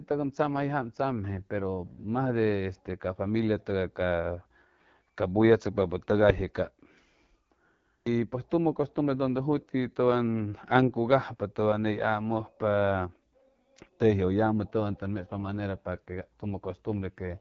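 From start to finish the speech carries AMR wideband (HD Voice) codec damage, and it is plainly audible. The codec rebuilds the voice from a pulse-driven model of the vocal tract. Here it is starved of bits. Vowels sound rough and raspy, with a buzzy, grainy edge. That fits a rate near 8.85 kbit/s, one of the codec's two lowest. Nothing reaches above 7.5 kHz. The top band sounds like a thin hiss of shaped noise.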